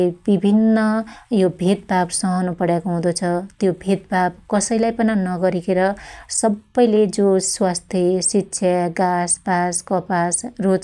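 Speech recording, no technical faults detected.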